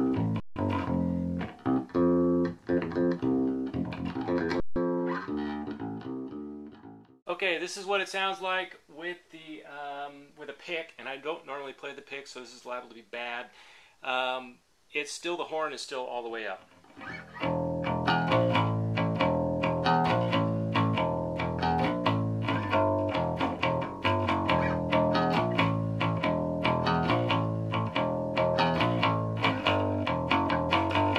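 The output buffer twice ran empty and the converter held its last sample, an underrun with held sample, freezing the audio flat for 160 ms at 0.4 and 4.6 s before resuming softly.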